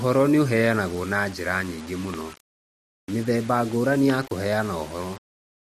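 Throughout the speech there is grainy, rough distortion consistent with low bit depth without dither. The grit tracks the signal and sits only about 20 dB below it. The likely cause is rounding to very few levels with no dither, which fits a 6-bit signal, so the error follows each syllable rather than forming a steady hiss. On a waveform the quiet stretches look stair-stepped, flattening to silence in the faintest tails. A spectrogram shows harmonic-like smearing spreading upward with the speech.

At 2.14 to 2.16 s, right after "njĩra nyingĩ", a single loud pop lands on top of the speech, which carries on beneath it. It peaks about 10 dB above the surrounding level. The likely cause is a sudden voltage step or pulse, such as a switch, static discharge or driver glitch. On the waveform it is a narrow spike towering over the speech. A spectrogram shows a thin vertical stripe across the whole frequency range.

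A second loud pop follows at 4.10 to 4.12 s, again a single sharp click sitting over the sound. It is stronger, at about 15 dB above the signal, so it sounds harder and more startling than the first. It looks much the same: an isolated tall spike in the waveform and a full-band vertical line on the spectrogram, with the speech continuing underneath.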